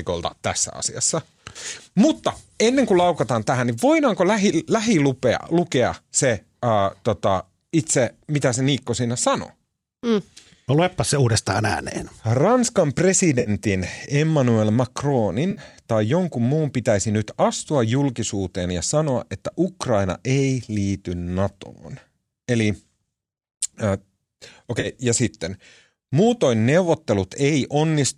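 AAC frame loss with concealment occurs at 13.40–13.50 s, at 15.51–15.61 s just before "tai jonkun muun pitäisi", and at 24.80–24.87 s before "ja sitten". The decoder rebuilds 60, 60 and 40 ms gaps from the last good spectrum, leaving brief smeared, phasey patches.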